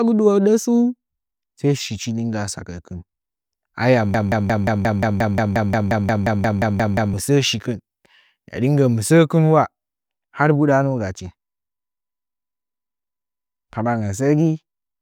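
At 4.14 s the speech locks into a broken-record loop: a fragment of about 0.18 s repeats exactly, back to back, 17 times until 7.14 s. Likely the player or stream stalled and kept resending its last held chunk, so the audio for those three seconds is simply gone.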